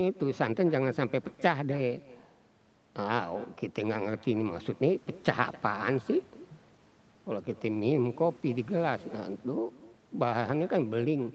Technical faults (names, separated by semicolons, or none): echo with no canceller